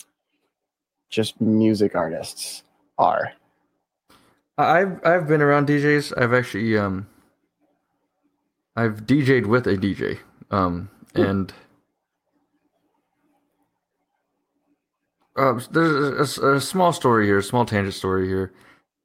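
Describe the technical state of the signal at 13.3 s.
The speech signal at 13.3 s is intact, with no fault at that moment.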